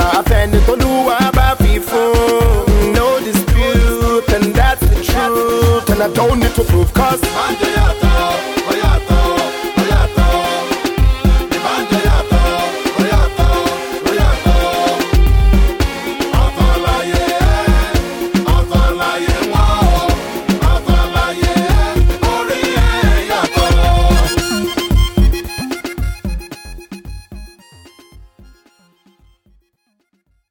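Nothing is technically wrong with this audio; the level simply fades out smoothly over roughly the last five seconds, ending at 30.5 s.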